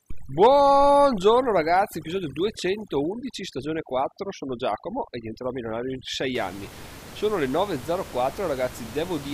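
From 0 to 6.35 s the speech sits over a lowered, twinkling background, the sign of overdone noise removal gating frequency bands near its noise estimate. After that, the room noise returns about 19 dB below the speech.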